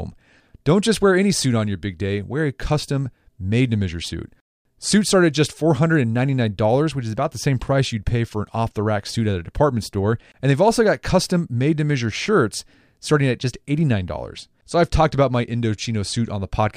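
Crude rate conversion runs from 14.16 s to the end of the clip. The speech has been resampled without a proper anti-aliasing filter, apparently by drawing straight lines between neighbouring samples, and the pattern of the error fits a 32 kHz to 48 kHz step. The leftover error sits roughly 35 dB below the speech and forms shifted, inharmonic copies of it. These are heard as a gritty, inharmonic fizz that rides on louder and brighter sounds.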